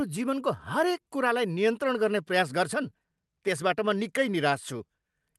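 A speech recording carried over a WebRTC-style call path using the Opus codec, with an audio band that stops at about 12 kHz, which fits a wideband-to-superwideband Opus setting. The main fault is clock drift between sender and receiver: the sender's clock runs roughly 2% slow relative to the receiver, so the jitter buffer steadily drains and the receiver must keep stretching the stream to avoid running dry. This shows up as repeated timing corrections from 0.18 s to 5.12 s. Across that stretch the receiver keeps inserting or repeating short fragments, so playback runs at about 98% of the original pace and picks up roughly a tenth of a second of extra length. All the edits push the same way, lengthening the audio, but they fall at uneven intervals. Each one is small, and any that are heard come across as slight hiccups or an unsteady tempo.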